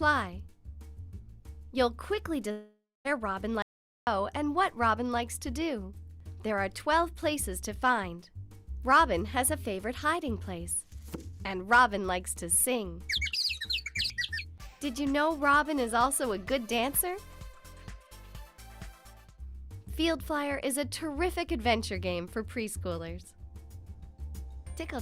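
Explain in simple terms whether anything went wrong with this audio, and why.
Two things went wrong. From 2.51 to 3.07 s there is what sounds like a long network dropout, likely caused by audio failing to arrive. The player stretches the last sound into a fading buzz, then about 0.23 s of near-silence, and roughly half a second is lost.

Shortly after, from 3.62 to 4.07 s, comes an audio dropout to silence, likely from the input briefly disconnecting or muting while recording continued. The sound cuts off abruptly into total silence, with no background at all, and about 0.45 s is gone.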